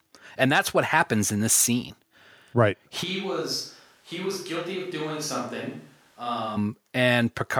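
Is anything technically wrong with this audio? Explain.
Yes, there's a switch to a distant microphone from 3.05 s to 6.55 s. Right at 3.05 s the speech suddenly goes roomy and hollow, thinner in the low end, and drops by about 10 dB, with more background noise underneath, sitting roughly 30 dB below the speech. At 6.55 s it snaps back to the close, full sound. The likely cause is that the close mic's feed dropped out and the mix fell back to a mic much further away.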